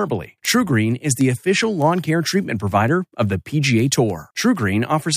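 From 0.15 s to 5.16 s, word clock ticks recur about every 0.15 s as the receiver's unlocked clock slips one sample. Their strict regularity separates them from random clicks.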